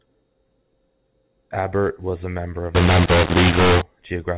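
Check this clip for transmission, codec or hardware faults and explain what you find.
One fault is present, a mu-law and A-law mix-up in this telephone speech. From 2.75 to 3.81 s, audio coded as G.711 mu-law is decoded as A-law. The two logarithmic scales map levels differently, so loud and soft samples come out wrong. The quietest samples jump well above silence. The stretch sounds harsh and distorted, and quiet gaps fill with noise.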